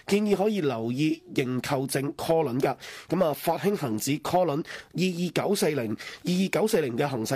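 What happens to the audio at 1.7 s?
Nothing goes wrong at 1.7 s; the audio runs through that moment intact, with no dropout, click or other fault.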